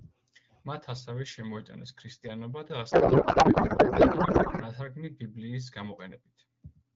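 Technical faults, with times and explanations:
2.91 to 4.63 s, codec payload misread: the speech turns into garbled noise and warble that barely tracks it, because octet-aligned AMR frames were unpacked as bandwidth-efficient, shifting every field.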